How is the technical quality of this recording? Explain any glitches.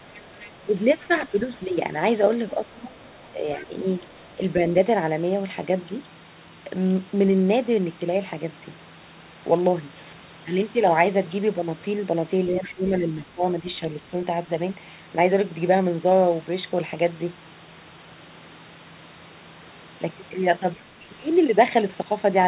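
The recording has two recurring glitches, both tied to echo control on a call. The speech is band-limited with nothing above 4 kHz, which fits a 64 kbps G.711 telephone codec.

The first is the other side's voice leaking through. It happens from 0.15 to 1.28 s, from 2.49 to 4.35 s, and from 12.65 to 12.89 s. A faint second voice sits under the speech, about 20 to 30 dB lower. It is most noticeable in the short burst near 12.7 s. This is likely residual echo. The far end played through a loudspeaker, and the canceller left some of it in the microphone signal.

The second is speech suppressed in double talk. It spans 1.07 to 4.62 s, 12.52 to 14.03 s, and 20.83 to 21.07 s. The main voice dips in pieces while the other side talks. The first stretch adds up to about a second of dips, reaching about 15 dB down. The later ones are shorter, at about 10 dB. The likely cause is the canceller turning everything down when it could not separate the two voices.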